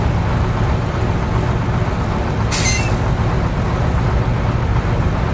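Nothing stood out on listening; the audio comes through a G.722 call path with nothing above 8 kHz, as that codec delivers.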